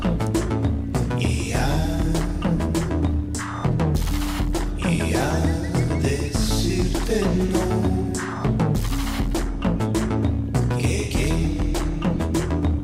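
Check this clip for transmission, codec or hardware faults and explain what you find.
Nothing wrong can be heard anywhere in the recording.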